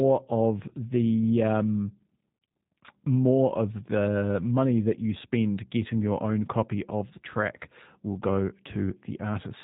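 Throughout the speech, G.729 coding is plainly audible: the voice is rebuilt from a filter, pitch predictor and sparse pulses, giving a rough, synthetic edge that fits an 8 kbit/s stream. A spectrogram shows a hard ceiling with nothing above 3.8 kHz.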